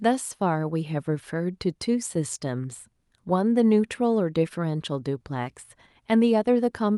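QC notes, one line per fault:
The speech comes through a WebRTC call path with the top end rolling off around 12 kHz, which fits an Opus codec at a fairly generous bitrate, and nothing in the signal calls for a fault entry.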